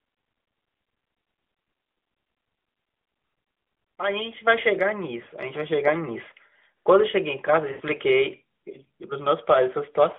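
At 4.47 s the microphone volume steps up. The call software judged the input too quiet and raised the device gain in a single move, by about 6 dB. Speech and background noise jump louder together. There is no ramp, just a sudden lift that stays for the rest of the clip.

Lost AMR speech frames follow, heard through the narrow 250 Hz to 3.5 kHz band of the AMR narrowband mobile codec. From 5.24 to 5.28 s a single gap, which fits one 20 ms frame, gives a brief dip and warble. The decoder fills it by repeating the last good pitch and vocal tract shape at lower gain. From 7.72 to 7.82 s the gap is longer, about 80 ms, which points to a run of four frames. The sound smears and fades, then returns briefly weak and rough.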